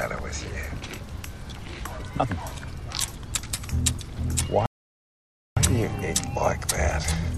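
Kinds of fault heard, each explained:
Playback stall: at 4.66 s the sound just drops out mid-flow and stays silent until 5.57 s, a gap of roughly 0.91 s, before picking up again. That's the classic pattern where the player has nothing to hand the output, most likely because its buffer ran dry or the playback thread got held up. It feels like the audio froze, then carried on.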